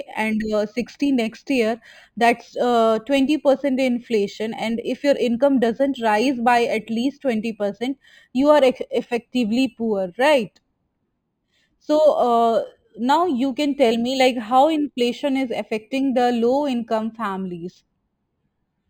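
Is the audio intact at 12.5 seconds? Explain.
No. Imaging from linear upsampling runs throughout, including 12.5 s. Straight-line interpolation from 11 kHz to 48 kHz dulls the top and leaves faint mirror images around 5.5–11 kHz, a light metallic shimmer on sibilants.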